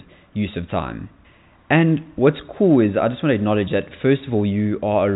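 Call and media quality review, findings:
No faults found: speech over G.711 telephone coding, band-limited with nothing above 3.8 kHz and only faint quantisation noise that follows the signal level.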